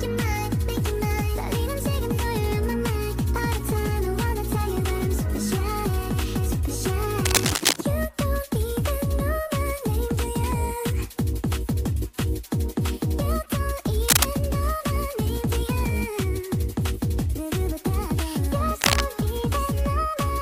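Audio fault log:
7.24–7.76 s, 14.08–14.33 s, 18.81–19.01 s: cable scratch noise. Dense, uneven rustling bursts sit over the sound, about level with it at first, then about 5 dB above. These are likely a worn connector or cable whose contact resistance fluctuated. Unlike isolated clicks or steady hiss, each burst is a ragged, continuous scratch lasting a fifth to half a second.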